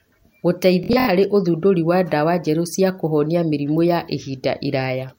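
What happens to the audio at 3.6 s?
Nothing goes wrong at 3.6 s; the speech carries on intact through that point, with no dropout, click, glitch or other fault to be heard.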